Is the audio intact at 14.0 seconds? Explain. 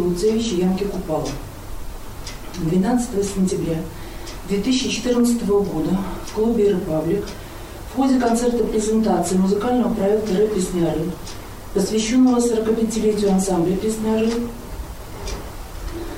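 No. Mains buzz runs from 12.47 to 14.19 s: switching spikes twice per 50 Hz cycle add raspy harmonics reaching several kHz, unlike smooth low hum, sitting well below the main sound.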